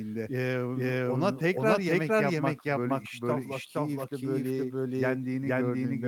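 Right from the start you hear a doubled audio track. A second full-band copy of the speech trails the original by around half a second at roughly the same loudness, with no decay or room colour. That's likely a second capture through a slower path, or an edit holding two copies out of step.

Running under the whole clip is clock drift between sender and receiver. The sender's clock runs slow, by something like one and a half percent, so the receiver's jitter buffer keeps draining and has to be topped up, which leaves a faintly uneven feel across the recording.

The result shows up as repeated timing corrections from 0.51 s to 5.46 s. The receiver keeps repeating short pieces, all in the same direction but unevenly spaced, so playback runs at about 98% and gains roughly a tenth of a second in total.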